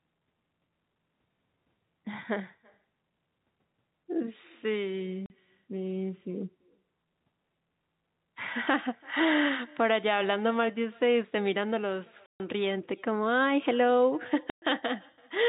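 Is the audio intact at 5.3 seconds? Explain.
No. 5.3 s is the tail end of a 40 ms hole from 5.26 to 5.3 s: packet loss filled with silence. That fits two lost 20 ms packets replaced by silence, so the audio drops out with hard edges. The echo with no canceller is also present here. A faint copy sits about 29 dB down and trails the audio by roughly a third of a second, because the far end's loudspeaker sound leaks back into its microphone.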